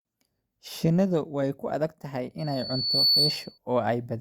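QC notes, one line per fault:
2.38–3.58 s, loudspeaker feedback squeal: a thin, piercing tone near 4.5 kHz rises out of the speech, swelling over roughly the first 0.7 s until it sits a few decibels above the voice, then holds as a steady whistle to the end of the event. The microphone is picking up the loudspeaker it feeds, and at that one frequency the loop gain tops unity, so the tone reinforces itself on every pass.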